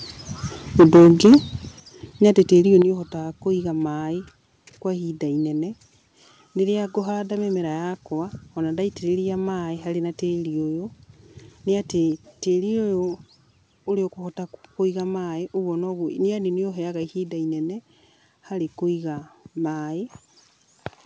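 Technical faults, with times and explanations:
0.79–1.36 s and 2.25–2.41 s, microphone overload: In the first stretch the peaks run about 9 dB past the converter's ceiling, and roughly a fifth of the waveform is flattened, giving the loudest moments a harsh, crackling edge. The second stretch is only about 1 dB over, with a small fraction clipped, so it sounds like a brief rasp. The likely cause is input gain set too high, so the tops of the waveform are sliced off at the converter's limit.
0.81, 1.8, 2.82 and 12.12 s, microphone volume stepped down: At each of these moments the level drops suddenly, the sound and the background together, by about 3, 9, 7 and 3 dB. The first three come during or just after the clipped passages. The likely cause is the call software's automatic gain control cutting the device's input volume in single steps, which is heard as abrupt jumps rather than a smooth fade. 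The call path's 8 kHz band limit, consistent with G.722, does not mask these jumps.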